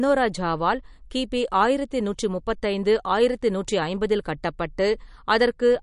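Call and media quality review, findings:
MP3 compression, throughout the clip. Speech band-limited, nothing above 10.6 kHz; watery, swirly texture plainly audible. Likely cause: MP3 encoder short of bits, cutting treble at a fixed frequency and dropping weak spectral lines in and out between frames. Consistent with roughly 43 kbps.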